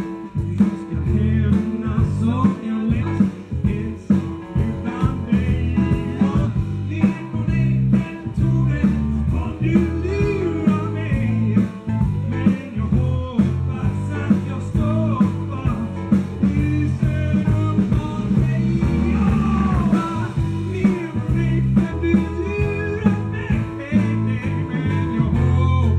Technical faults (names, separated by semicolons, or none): damaged data in a compressed stream